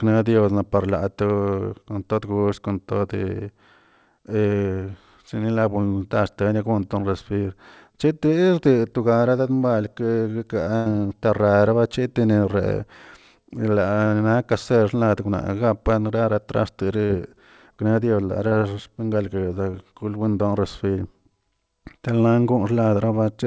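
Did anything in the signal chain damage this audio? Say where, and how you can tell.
Yes. The damage happened on the network, in a call path whose audio stops at 8 kHz, which points to a wideband codec such as G.722 at 64 kbps.

At 10.76 to 10.88 s there is a burst of packet loss. About 100 ms of audio never arrived. The receiver stretched the last sound across the hole, fading it as it went, so you hear a held buzz or decaying hiss before the audio picks up further on with that stretch gone. Silence or a click would suggest a buffer underrun. This gap is filled, and at a tenth of a second it is far longer than ordinary concealment.

Short concealed packet loss occurs at 17.06 s and 18.48 s, each about 40 ms, and at 19.71 s, about 20 ms. Each time, the decoder covered a brief gap by extrapolating the preceding sound and crossfading back into the real signal. That leaves a quick smear or wobble, and a short consonant can drop out. 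These are too brief to produce the audible held tone of the burst at 10.76 s, and they are blended rather than hard cuts, which separates them from dropout clicks.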